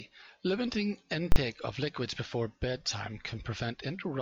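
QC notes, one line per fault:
1.32 to 1.36 s, invalid numbers at full scale: a hard pop at each edge of a 40 ms block, with the speech gone between them. A calculation produced infinite or invalid values, which were clamped to maximum level and held there for the whole block.
2.89 to 2.90 s, corrupt frame decoded: a brief chirpy blip, peaking at roughly -20 dBFS, over what sounds like two damaged frames. Flipped bits were decoded anyway, so misread gains and codes put energy at the wrong frequencies.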